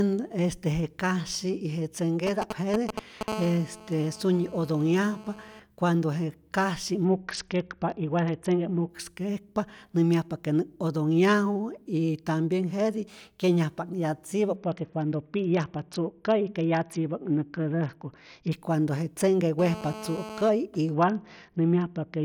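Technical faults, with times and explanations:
2.27–3.23 s, GSM signalling bursts: a galloping dit-dit-dit of short 217 Hz buzzes, nearly as loud as the speech. A nearby 2G phone is signalling to its network, and the audio circuit rectifies the short radio bursts into clicks.
3.28–5.60 s, GSM phone buzz: the pattern settles into a steady, hard, raspy 217 Hz buzz, full of harmonics, about 15 dB below the speech. The phone has gone into a call and now transmits in bursts 217 times a second, so the rectified pulses run steadily.
7.05–8.90 s, Bluetooth SBC bit pool drop: right after "je kasyi" the top end dulls and a gritty grain comes up under the speech. The link got congested, and it sounds like the SBC bit pool fell from around 28 to about 7, near 66 kbps, starving the upper sub-bands.
14.56–18.52 s, Bluetooth SBC bit pool drop: the same dull, grainy sound returns for about 4 seconds, again pointing to the encoder cutting its bit pool to survive a crowded link until the rate came back.
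19.59–20.49 s, GSM phone buzz: just after "je tzenhke" the raspy 217 Hz buzz is back, about 12 dB under the speech, so a touch louder than before. That's the phone in a call again, its transmit bursts rectified into the audio.
20.94 s to the end, Bluetooth SBC bit pool drop: the treble goes dull and gritty once more and stays that way to the end of the clip, consistent with the bit pool dropping to about 7 and never recovering.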